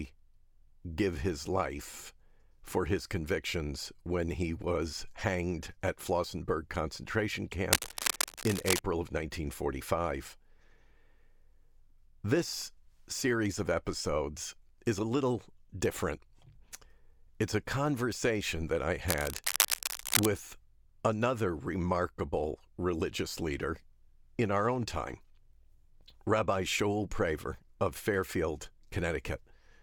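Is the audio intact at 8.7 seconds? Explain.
No. Cable scratch noise runs from 7.71 to 8.81 s, likely from a worn cable or connector being moved so its contact resistance jumps about rapidly. That injects dense, irregular bursts of scratching and rustling, roughly as loud as the speech itself.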